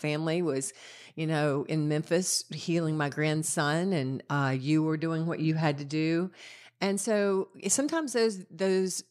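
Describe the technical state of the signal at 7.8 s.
At 7.8 s the signal runs cleanly, with no dropout, clipping, distortion or other audible fault at that moment.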